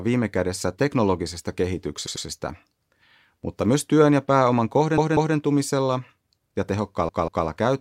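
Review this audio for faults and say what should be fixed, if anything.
Repeated frames make the speech stutter three times. At 2.06 s, after "viime kädessä teknologisesta", a 96 ms block plays twice more, adding 192 ms. At 4.98 s, after "myös työn ja pääoman", and again at 7.09 s, a 192 ms block repeats twice, adding 384 ms each time. The block lengths point to short runs of compressed frames being sent again and decoded again. Unlike an echo, each repeat comes back at full level with no decay. Unlike a dropout, no sound is lost. To prevent it, the writing or transport stage should discard duplicate frames by sequence number before decoding.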